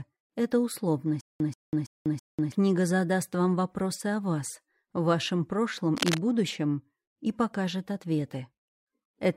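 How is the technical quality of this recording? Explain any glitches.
The recording has two clear glitches.

From 1.21 to 2.52 s there is a stutter with silent gaps. A 135 ms fragment repeats four times, each followed by 193 ms of digital silence, giving an even 328 ms cycle. This likely comes from the player stalling and replaying its last fragment on each retry, so the audio that should have played there is lost. On a waveform it appears as identical blocks separated by flat silent stretches. A spectrogram shows matching slices with blank columns between them.

From 5.97 to 6.26 s there is cable scratch noise. Dense, uneven bursts of rustling sit about 5 dB below the signal. This is likely a worn cable or connector being moved, which makes its contact resistance fluctuate rapidly. On a spectrogram it shows as ragged broadband vertical streaks, and on a waveform as jagged spikes riding on the signal.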